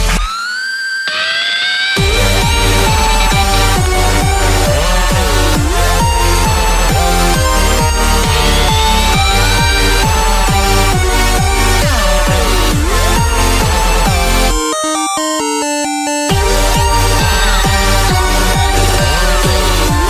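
No technical faults are audible.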